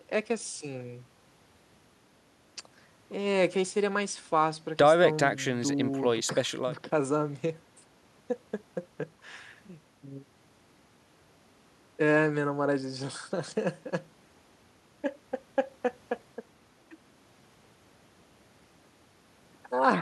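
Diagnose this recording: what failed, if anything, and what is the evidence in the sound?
Nothing in the recording points to a failure at any stage of the chain. The room's own background noise sits about 37 dB below the speech, as part of the acoustic scene rather than anything the system added.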